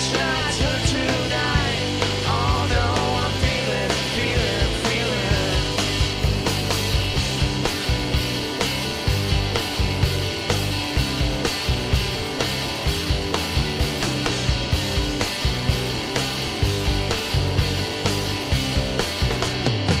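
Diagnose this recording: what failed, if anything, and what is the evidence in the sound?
Nothing failed; no fault is audible anywhere.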